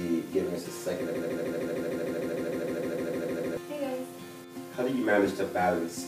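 From 1.14 s to 3.57 s, a 153 ms fragment repeats back to back, sixteen times, in a stuttering broken-record loop, and the audio meant for that stretch never arrives. The likely cause is a stalled player or stream resending its last buffered fragment.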